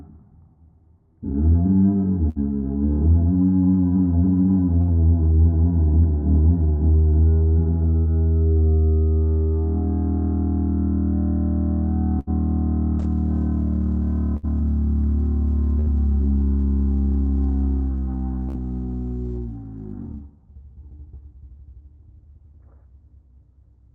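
A recording of everyday sounds, carried over an Opus call path whose band ends near 12 kHz, with seven bursts of packet loss at 2.29, 4.82, 7.99, 12.19, 14.37, 15.79 and 18.49 s. At each one, about 60 ms of audio is missing. The receiver bridges the gap by extending the last sound as a fading hiss or buzz, then resumes further on. In a waveform this shows as a brief decaying stretch, and in a spectrogram as a smeared, flattened band before an abrupt restart.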